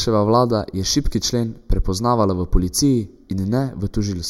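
Speech with channel delay (comb filtering) throughout: one channel lags by roughly a fifth of a millisecond, so summing to mono carves fixed, evenly spaced notches starting near 3 kHz, leaving a hollow, phasey tone. Unlike flanging, the notches never sweep.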